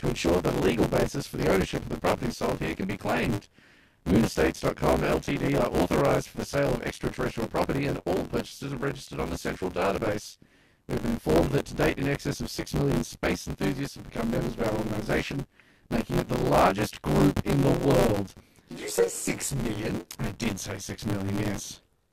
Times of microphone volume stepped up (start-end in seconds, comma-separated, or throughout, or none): none